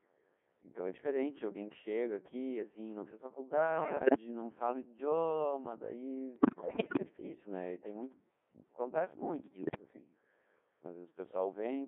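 It's a speech clip squeezed through the Codec 2 vocoder the whole way. The band sits at about 250 Hz to 3.5 kHz and the damage is heavy: robotic, buzzy, resynthesised from pitch and envelope data, and the buzz fits its 1.6 kbit/s mode. Then there are bit errors on digital voice radio at 3.73–4.17 s, 6.36–7.00 s and 9.44–9.81 s. Corrupted frame parameters make the voice lurch in pitch and level and warble into gibberish, and the middle burst is clearly the worst, with a much higher error rate.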